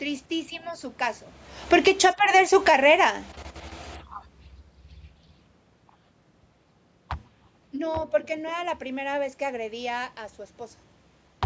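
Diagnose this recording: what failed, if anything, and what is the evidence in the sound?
Automatic gain falling in the call processing stage: the gain control cut about 12 dB between 1.57 and 2.97 s, so speech and room noise sink together.

Automatic gain rising overlaps it from 2.12 to 3.5 s. Judging the input too quiet, the control adds about 8 dB, and speech and background swell together.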